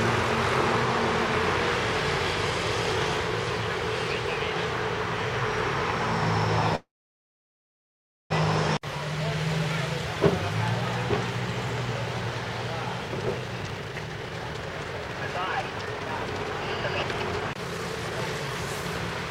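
A call audio freeze runs from 6.75 to 8.32 s: the sound stalls into about 1.4 s of silence, likely from delayed packets draining the jitter buffer, then resumes where it stopped, with nothing lost.

A jitter buffer speed-up follows from 13.09 to 18.84 s: repeated removal of short pitch-period pieces trims roughly one and a half seconds, so the audio plays about 24% faster at unchanged pitch and sounds hurried.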